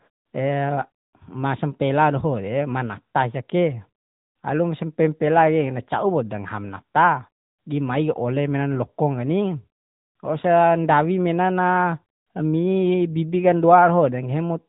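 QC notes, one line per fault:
Throughout: AMR narrowband mobile codec. The speech has the closed-in, telephone quality of a 2G or 3G call. Nothing above 4 kHz comes through, which fits 8 kHz sampling. The voice carries a plainly audible buzzy, synthetic edge because the codec rebuilds it from a vocal-tract model excited by a few pulses per 5 ms subframe. That edge is consistent with a mid-range mode around 10.2 kbps. Gaps fall silent cleanly rather than warbling.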